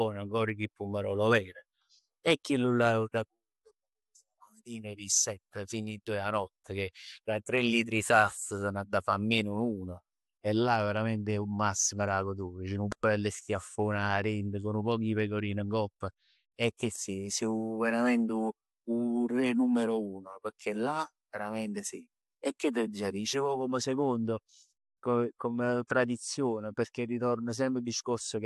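Listening through the speech, nothing stood out as a technical fault at any point.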